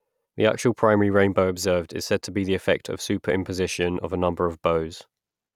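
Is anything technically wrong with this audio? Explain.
No, nothing is technically wrong with this audio.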